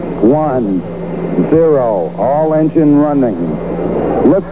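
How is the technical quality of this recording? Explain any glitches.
No technical faults can be heard anywhere in the recording, and the signal holds steady throughout.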